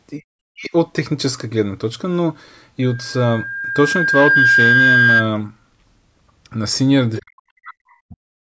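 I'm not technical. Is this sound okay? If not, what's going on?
No. Three kinds of problem can be heard.

Speech suppressed in double talk: the call's echo canceller, likely confused by both sides talking at once, turns the talker down, so the speech dips almost to silence at 0.17 to 0.27 s, 0.51 to 0.71 s, 7.22 to 8.17 s and 8.36 to 8.42 s.

Loudspeaker feedback squeal: a microphone picks up its own loudspeaker, and the sound loops until a steady 1.6 kHz whistle builds over about a second and a half, lasting from 2.82 to 5.28 s.

Other side's voice leaking through: the echo canceller likely missed some of the loudspeaker sound, so a faint scrap of a second voice slips in at 7.15 to 7.22 s.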